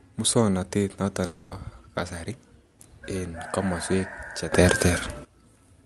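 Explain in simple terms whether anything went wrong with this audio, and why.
Right after "muswongnotet noton", from 1.25 to 1.53 s, the sound turns into a smeared buzz that stretches the last sound out instead of continuing normally. This is a long network dropout: audio likely stopped arriving, so the receiver filled the gap, and the missing part never comes back.

After "en komoswek", at 4.52 s, the sound abruptly becomes much louder, background noise included, and stays that way until 5.25 s. This is a sudden gain jump, likely from a volume setting being switched instantly instead of being eased in gradually.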